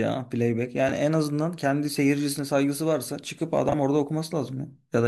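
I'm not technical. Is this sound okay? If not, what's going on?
No, there are two brief frames-out-of-order glitches, at 0.87–0.92 s and 3.69–3.74 s, where tiny chunks of the speech play swapped, giving a quick garbled flutter.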